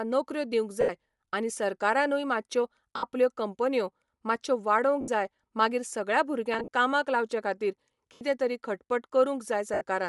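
Throughout, the speech has a grainy, breathy upper band, likely from Bluetooth LC3 compression at a rate consistent with about 48 kbps, where the codec swaps high-frequency detail for filled noise.

Lost LE Audio frames at 0.81, 2.96, 5.01, 6.54 (scattered over 160 ms), 8.13 and 9.74 s leave 70 to 80 ms of concealment: noisy, smeared fragments that briefly replace the speech.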